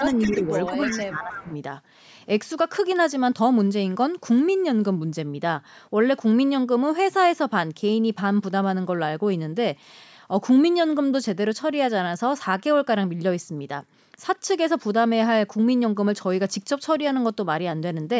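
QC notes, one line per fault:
0.05–1.06 s and 1.3–1.54 s, echo leak: a delayed copy of the talker trails the original by about 313 ms, roughly 15 dB down, likely because a loudspeaker on the far end fed back into its microphone and the echo canceller let the residue return.
0.37–0.5 s, 0.69–0.75 s and 0.96–1.52 s, speech suppressed in double talk: the talker's level dips in brief pieces, shallow at first and then deeper, up to around 15 dB. This is likely the echo canceller ducking everything while both sides overlap, unable to separate the talker from the echo.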